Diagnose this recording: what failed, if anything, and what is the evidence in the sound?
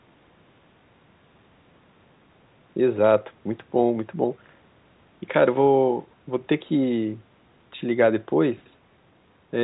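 Nothing has gone wrong here. The speech has the usual trimmed low end of a call's microphone path and, at most, a faint trace of its telephone codec, which is just that chain doing its ordinary job.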